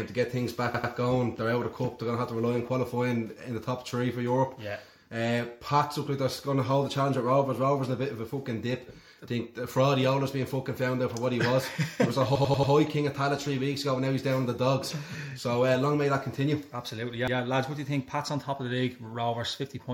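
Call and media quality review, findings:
Repeated buffer, three stutters: 0.74–0.93 s (segment heard 3 times), 12.35–12.73 s (5 times, longest), 17.28–17.37 s (twice). Each repeated slice is about 93 ms, which fits a 4096-sample playback buffer. Probable component: output device or driver underrun, with the last buffer replayed while new data was late. Unlike a dropout, there is no silent gap and no skipped material: the identical slice recurs with a hard join at each repeat, and the sound then continues where it left off.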